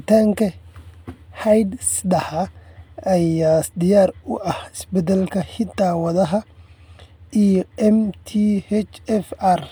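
Nothing in this speech recording stood out as a technical problem on listening.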